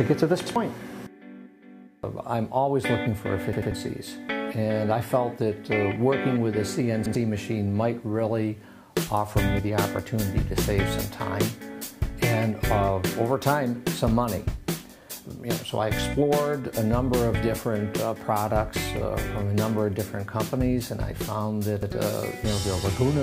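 At 0.46, 3.53, 7.06 and 21.83 s, a repeated buffer occurs. Fresh audio arrived late, so the same 93 ms piece replays with a hard join, which fits a 4096-sample buffer. Each sounds like a brief stutter. At 3.53 s it repeats twice.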